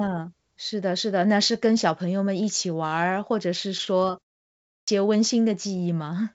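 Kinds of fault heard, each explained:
Repeated stalls (stutter): between 3.78 and 4.28 s the audio hesitates five times, each a brief hold of no more than about 51 ms, adding up to roughly 100 ms, about a fifth of that half-second. Packets reached the jitter buffer late, so it ran dry and the receiver stretched the last sound to cover each wait. Nothing is dropped; the speech simply drags and judders through that stretch.
Clipped start after a pause: at 4.59 s, after a pause of about 0.43 s, the speech resumes abruptly, its opening 286 ms missing until 4.88 s. During the silence the output device went idle, and it needed that time to wake and lock back onto the stream, so the beginning of the returning sound was swallowed and the speech appears mid-onset out of silence, with nothing heard above 8 kHz as the G.722 call path passes it.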